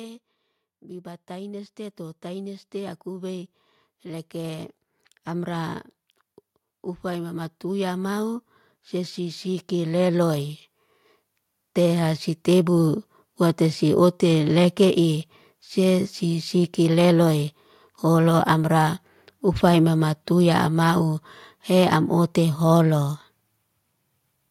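From 0.79 s to 5.82 s the level creeps up by about 9 dB. That's automatic gain rising: the gain control decided the input was too quiet and kept nudging its gain up over several seconds, so the speech and the background swell together rather than the talker simply getting louder. It happens again from 7.01 s to 10.54 s, this time by about 7 dB, with the same slow, even lift of everything in the room.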